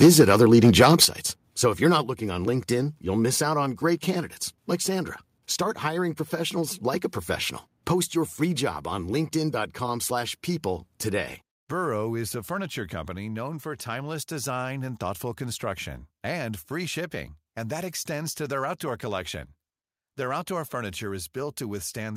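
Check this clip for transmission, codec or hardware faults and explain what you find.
Two kinds of fault appear in the first 2.1 seconds of this speech: microphone overload, and three step-downs in microphone volume.

From 0.02 to 1.05 s the speech shows microphone overload. The input is driven about 7 dB past what the converter can represent, so the loudest peaks are sliced flat, roughly one sample in twenty. This is likely input gain set too high. It sounds harsh and crackly on strong syllables. The waveform shows flat-topped peaks, and the spectrogram shows broadband smearing up to several kHz.

The microphone volume is stepped down three times: at 0.04 s by about 2 dB, at 1.05 s by about 7 dB (as the overload ends), and at 2.07 s by about 3 dB, between "if you're not" and "looking on". This is likely the call software reacting to the clipping by lowering the device's input level. Voice and background both drop abruptly. 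The waveform envelope shows a sudden stair-step shrink, and the spectrogram darkens uniformly across all frequencies at each point.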